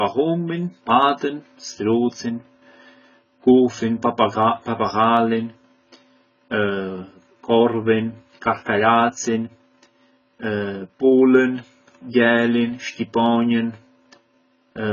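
Speech, heavily marked by AAC compression for its whole length. Nothing survives above about 7.1 kHz, and what remains sounds dull and smeared, with a warbling, fizzy texture on vowels and sibilants, which fits AAC-LC at around 16 kbps, likely the cause. That swirling texture and the gaps in the spectrum separate it from a plain low-pass filter, which would only darken the sound and leave it clean. From 0.12 s to 14.91 s there are also clock slip clicks, roughly every 30 ms, so they merge into a soft rattle rather than separate ticks. This points to two devices running unsynchronised clocks that differ by roughly 700 ppm, likely causing a single sample to be dropped or repeated at each slip. Unlike random crackle or dropouts, the rattle keeps a steady rate, grows clearest on loud sustained sounds, and vanishes in silence.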